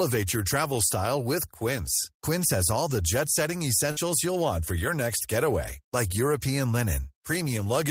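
Speech with a burst of packet loss at 3.91 to 4.00 s, between "all the jet setting" and "you'll want for your". About 51 ms is concealed by a fading continuation, and about 60 ms is skipped.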